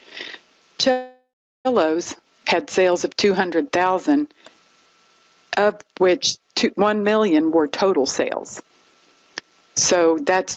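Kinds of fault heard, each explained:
Gain pumping: The level breathes throughout the clip, with a swing of roughly 25 dB. Loud and soft parts sit close together, so the sound feels squashed. The likely cause is input gain set far too high, with a fast limiter or compressor pulling it back down on every peak.
Call audio freeze: From 0.91 to 1.67 s the audio stalls. The last sound is stretched into a fading buzz or hiss, which drops to silence for about 390 ms of the hold. The audio then resumes where it stopped, so nothing is lost, but roughly 735 ms of gap is inserted. This likely comes from delayed packets leaving the jitter buffer empty until they arrive.
Jitter buffer speed-up: The audio hurries twice while keeping its pitch. From 7.38 to 7.97 s it runs at 106% speed, losing about 40 ms. From 9.92 to 10.38 s it runs at 109%, losing about 50 ms. Here the receiver trims short pitch-period slices in quick succession. 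It does this to drain excess buffered audio and cut delay.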